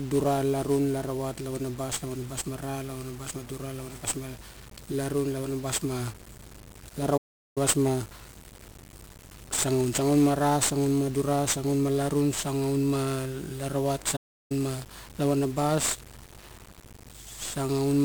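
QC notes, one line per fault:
Throughout: 1-bit DFPWM compression. The whole speech track carries that thick, fizzy crackle you get when each sample is squeezed down to a single up-or-down bit driving an adaptive level. The coarseness of that step shows up as loud broadband noise riding on everything, and the top end is smothered in hiss. The damage here is heavy, and the grain fits a DFPWM stream at around 48 kbps.
7.17–7.58 s and 14.16–14.52 s: playback stall. The speech just drops out mid-flow, to dead silence, for about 0.39 s the first time and 0.34 s the second, then picks back up. That's the signature of the player going quiet because it had nothing to output, most likely because its buffer ran dry or its thread got held up, and it resumed once data arrived again.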